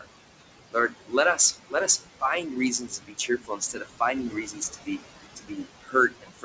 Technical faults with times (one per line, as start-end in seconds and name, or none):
0.00-6.45 noise suppressor artifacts
0.71-2.23 speech cut by the noise suppressor
2.79-5.03 speech cut by the noise suppressor
5.36-6.45 speech cut by the noise suppressor